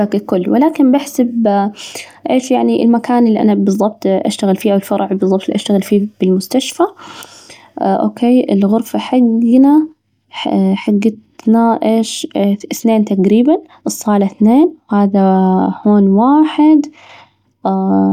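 No technical faults are audible anywhere in the recording.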